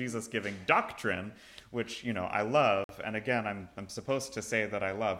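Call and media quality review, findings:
Dropout to silence, 2.84–2.89 s, about 50 ms, audio resumes where it stopped. Waveform: flat silent gap; spectrogram: full-band vertical blank strip. Likely Bluetooth stall: interference delayed packets, headphone buffer emptied, playback paused awaiting retransmission.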